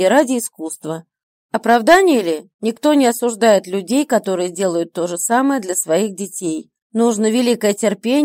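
From 0.17 to 0.21 s there is hard clipping: the signal overshoots the stage's maximum by about 2 dB, so peaks are sliced flat. It sounds like a brief crackle. On the waveform the tops appear squared off, and the spectrogram shows a vertical smear of high harmonics.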